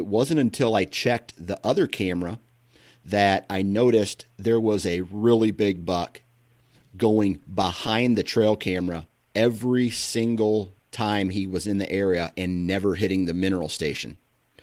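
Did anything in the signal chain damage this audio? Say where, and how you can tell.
Yes. Clock drift between sender and receiver affects the whole clip. This is a network and jitter-buffer problem. The sender's clock runs about 5 percent slow. The receiver's buffer keeps draining, so small timing hiccups recur unevenly from start to finish.

Repeated timing corrections run from 0.09 to 14.54 s. The receiver stretches the audio, playing it at 96 percent speed by repeating short pieces. Well over half a second is added in total.

Scattered short gaps appear between 0.89 and 2.00 s, and again between 7.43 and 8.34 s. Each stretch has a handful of tiny holes, the longest around 10 ms. The receiver fills each one by continuing the last sound, which leaves brief ticks and smears.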